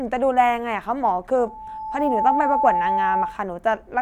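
At 1.37 s a loudspeaker feedback squeal begins. A single tone near 871 Hz rises out of the speech. It swells over roughly a second. By then it sits a few decibels above the speech. The microphone is picking up the loudspeaker it feeds. At 871 Hz the loop gain has gone past one. Each trip round the loop makes that tone louder. The squeal holds until 3.42 s, when it stops.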